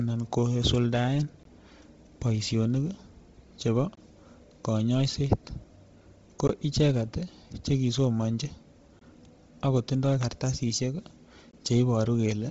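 Throughout the speech there is a breathy, grainy edge, and nothing is present above 7.8 kHz. The heavy damage sounds like Bluetooth LC3 compression, likely at a low rate: it fits about 24 kbps with 7.5 ms frames, where the upper spectrum is zeroed and refilled with noise.

Short holes of 20 ms fall at 1.43 to 1.45 s, 3.95 to 3.97 s, 6.47 to 6.49 s (just before "icheket chekisomanji"), 8.99 to 9.01 s (after "ko icheket chekisomanji") and 11.51 to 11.53 s (after "akotindoy kartasishek"). These are gaps between chunks: the audio arrives in 2.5 s pieces with silence inserted at each join.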